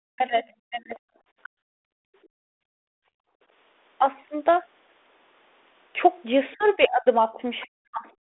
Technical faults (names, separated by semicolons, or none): speech suppressed in double talk; bit errors on an ADPCM link; background gated by the echo canceller; other side's voice leaking through